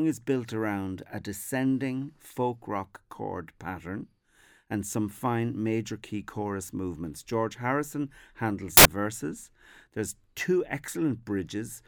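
A speech recording in which, from 8.77 to 8.85 s, about 80 ms of samples are built from the wrong bytes. The bytes of each sample are put together with the wrong offset or order, so the fast-changing low bits become the bulk of each value, and the speech turns into a loud burst of harsh broadband noise. On a spectrogram this appears as a bright band covering every frequency, and on the waveform as a dense block.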